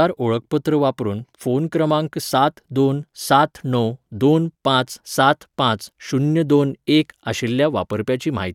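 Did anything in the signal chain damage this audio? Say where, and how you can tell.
No, nothing in the signal chain audibly damaged this speech recording. No stage between capture and playback leaves a mark that a listener can pick out.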